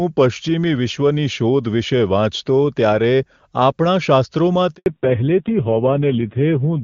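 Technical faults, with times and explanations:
4.76 to 4.86 s, handover gap: The speech drops out for about 100 ms, fading within a few tens of milliseconds rather than cutting hard, then sitting in silence until audio picks up again. That's the call being passed between networks with no speech frames getting through during the switch, so whatever was said in that tenth of a second never arrives at all.
4.86 s to the end, fallback to narrowband: Right after the gap the speech loses everything above 4 kHz and stays that way, so it turns muffled and rougher and raspier. Before the switch it had the full HD Voice band, consistent with AMR-WB running around 23.85 kbit/s. After the handover the call dropped to an older narrowband codec, and the coarse texture points to AMR-NB at a low rate, something like 5.9 kbit/s.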